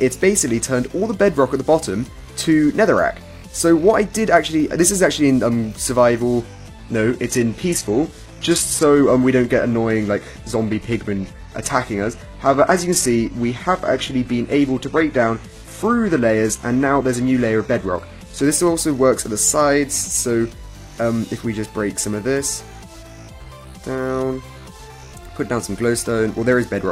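From 6.41 s to 18.41 s the adaptive stream switches to a lower bitrate. The quality changes abruptly with no gap, codec artefacts increase, and nothing remains above 12.4 kHz, which fits a low-rate HE-AAC stream. A spectrogram shows a flat ceiling across that stretch.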